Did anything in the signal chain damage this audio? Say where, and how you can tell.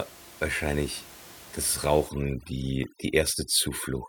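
Yes, overdone noise removal in the call processing stage, starting at 2.09 s right after "wahrscheinlich das" and running to the end. The room noise, about 20 dB below the speech, drops and breaks up into twinkling specks because the suppressor is muting bands near its noise estimate.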